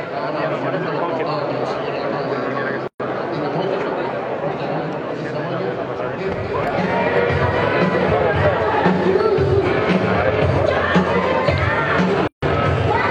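Two gaps at a join of encoded pieces cut into otherwise continuous sound: about 121 ms at 2.88 s and about 150 ms at 12.27 s. Each segment was encoded separately and joined untrimmed, so the encoder's start delay and end-frame padding stay in as short silences, smeared at the edges.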